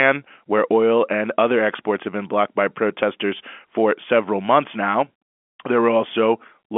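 No technical faults can be heard in the speech here. It comes through the G.711 telephone coding of an ordinary phone line, with the sound confined to roughly 250 Hz to 3.4 kHz and nothing audible above about 3.7 kHz.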